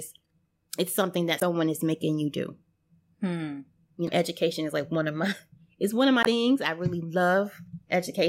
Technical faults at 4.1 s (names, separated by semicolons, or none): damaged data in a compressed stream